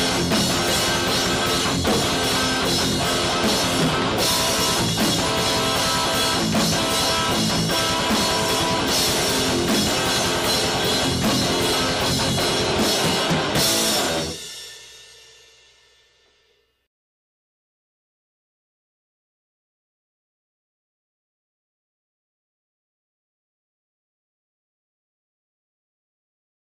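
No technical fault can be heard anywhere in the audio; the signal stays continuous and intact throughout.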